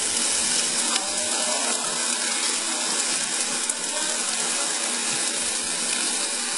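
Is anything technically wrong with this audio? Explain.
Yes. Throughout, the treble sounds gritty and metallic, with nothing above 11.1 kHz, likely from HE-AAC compression at a very low bitrate, around 12 kbps. The upper band is rebuilt by copying lower bands upward, so harmonics misalign; a spectrogram shows a hard ceiling and smeared, repeated-looking high bands.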